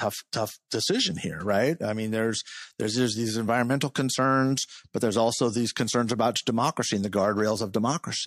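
Long transform blocks of about 36 ms, never switched to short blocks at the attack, spread quantisation noise backward as pre-echo from 0.68 to 0.71 s, just before "decision here right i". For 26 ms, hiss rises about 17 dB above the quiet gap, softening the onset.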